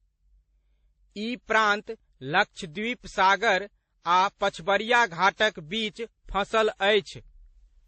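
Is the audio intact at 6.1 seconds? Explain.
No. At 6.1 seconds, as across the whole speech clip, nothing is heard above about 8.3 kHz, and the sound carries layered coding smear: the artefacts of different codecs heard together. This is likely transcoding between lossy codecs, a chain that points to low-rate MP3, then WMA, then MP3 again. Each pass re-encodes the previous artefacts and adds its own. A single low-bitrate encode would give one consistent texture, not these mismatched ones heard together.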